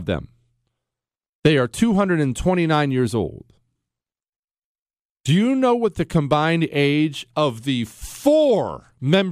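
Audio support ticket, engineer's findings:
No faults found on review of the speech recording. No component flagged and no action required.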